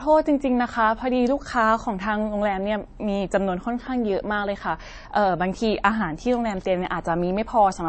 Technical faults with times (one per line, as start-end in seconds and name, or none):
0.00-7.89 transcoding between lossy codecs